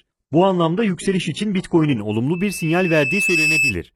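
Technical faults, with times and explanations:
0.0–2.0 s: adaptive stream starting at a low bitrate. The speech sounds thin and smeared, nothing above 11.1 kHz, then sharpens suddenly without a gap, unlike a dropout.
2.33–3.77 s: loudspeaker feedback squeal. A single 2.6 kHz tone swells over about a second to roughly the speech's level, growing by itself rather than holding steady like a whistle.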